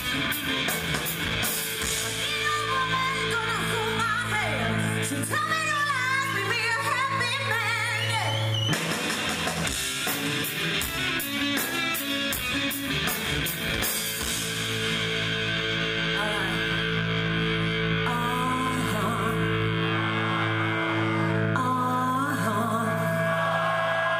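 No technical faults are audible.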